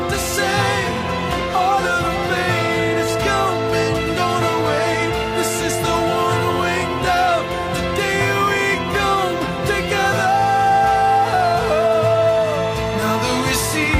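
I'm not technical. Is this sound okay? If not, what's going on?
Yes, this sound is okay. Nothing in it points to a technical problem that needs fixing.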